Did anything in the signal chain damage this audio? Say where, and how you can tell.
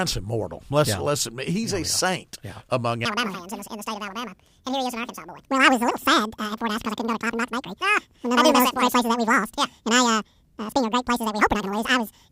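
Yes. The damage happens at sample-format conversion. From 3.05 s, just after "yeah saint yeah among", to the end at 12.31 s, the speech plays at double speed. It sits a full octave higher, 12 semitones up. This is audio read two samples at a time. The reader treats each pair of samples as one frame, as if the stream were stereo or wider samples. The timeline halves, so pitch doubles.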